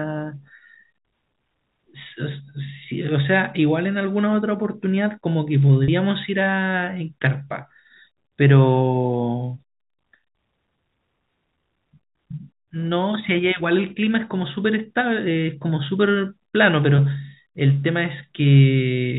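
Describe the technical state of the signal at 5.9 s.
Packet loss with pitch repetition occurs from 5.84 to 5.88 s. About 40 ms of audio went missing, which fits two 20 ms packets, and the receiver bridged the gap by replaying the last pitch period of the speech. The result is a brief, slightly held, buzzy sound.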